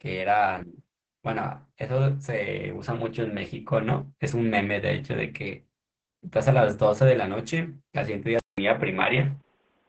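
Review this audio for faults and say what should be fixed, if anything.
Opus voice compression is heavy and affects the whole clip. The speech has nothing above 8.7 kHz, which fits Opus in wideband SILK mode, where a linear-prediction coder models the voice and codes its excitation coarsely. The strong muffling, hoarseness and slightly robotic texture point to a bitrate of around 10 kbps, too little for SILK to carry fine detail. To prevent this, encode at a higher Opus bitrate or keep an uncompressed original for this material.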